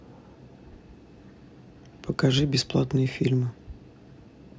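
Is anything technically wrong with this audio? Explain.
No, nothing is technically wrong with this audio.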